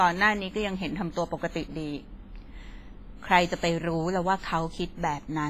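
WMA compression, heard throughout the speech, is the likely cause of the ringing, washy texture and the hiss that swells and fades with the signal. Long transform blocks smear quantisation noise around each sound, weak detail drops out, and nothing remains above 15.5 kHz, which fits a low bitrate around 24 kbps.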